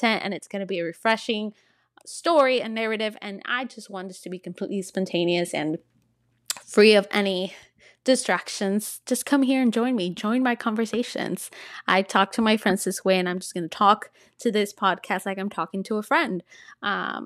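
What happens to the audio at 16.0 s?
Nothing goes wrong at 16.0 s; the speech runs through that moment intact, with no dropout, click or distortion.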